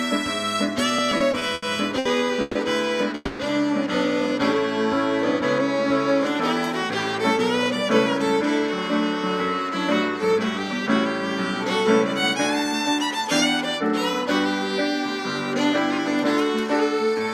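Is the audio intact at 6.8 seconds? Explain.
Yes, the audio is intact at 6.8 seconds, with no dropout, click, distortion or other fault at that point.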